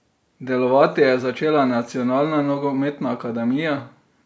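No technical faults occur at any point in the audio.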